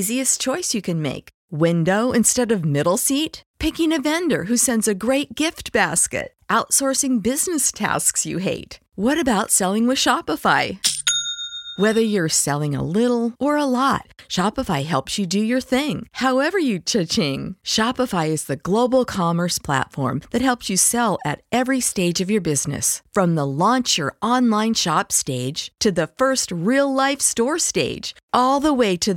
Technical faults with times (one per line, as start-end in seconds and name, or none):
none